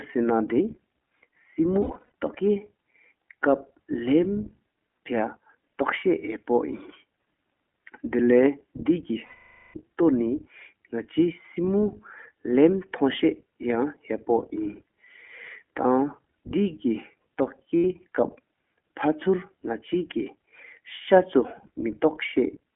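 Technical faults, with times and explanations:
Throughout, iLBC codec: speech is confined to a narrow phone band, roughly 200 Hz to 3.4 kHz, with a slightly rough, synthetic edge from 15.2 kbps coding in self-contained 20 ms frames. A spectrogram shows nothing above about 3.4 kHz, a hard ceiling across the whole clip.
1.82–2.05 s, 9.26–9.77 s and 17.78 s, lost iLBC frames: packets dropped and the decoder stretched the last pitch cycle with added noise, giving a held, buzzy vowel-like sound, longest and fading near 9.3–9.8 s, briefer and scattered at 1.8 s. Waveform shows repetitive periodic cycles; spectrogram shows flat, unchanging harmonic bands, with clean recovery right after each.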